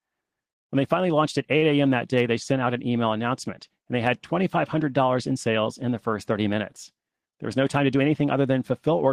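Speech, with two network playback faults. At 1.57 to 1.65 s, just after "they finally launched at", there is a short stall from a late packet. The last sound is held about 45 ms, then continues with nothing lost. From 7.57 to 8.23 s comes a jitter buffer speed-up. Tiny pitch-period slices are cut repeatedly, removing about 50 ms. Speech runs at 107% speed, same pitch, and sounds hurried.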